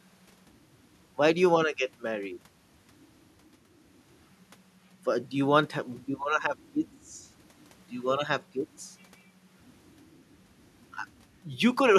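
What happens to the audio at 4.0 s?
Nothing goes wrong at 4.0 s: the speech plays through that moment intact, with no dropout, click, glitch or other fault.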